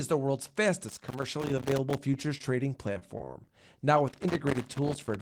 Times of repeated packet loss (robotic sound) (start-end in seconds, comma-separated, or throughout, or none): 2.11-2.45